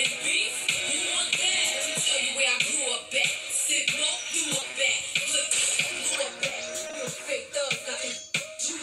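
From 4.59 to 5.49 s there is repeated packet loss, with a robotic sound. Five brief holes of up to 20 ms each are patched by extending the preceding sound, about 100 ms in all. The stretch turns choppy, unlike a single dropout, because the gaps follow one another closely.

At 5.97 to 6.01 s comes a short concealed packet loss. A single 20 ms hole is filled and blended back in, heard as one isolated smear or wobble rather than a run of breaks.

From 6.49 to 6.95 s the repeated packet loss returns. Four holes totalling 80 ms are concealed, packed more densely than in the first stretch.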